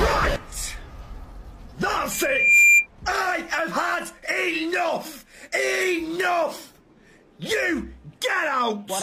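A loudspeaker feedback squeal cuts in at 2.11 s and runs to 2.87 s. It's a single 2.4 kHz tone that swells over roughly half a second until it sits about 10 dB above the rest of the sound. A mic was hearing the speaker it feeds, and at 2.4 kHz the loop gain went past one, so that frequency kept growing by itself.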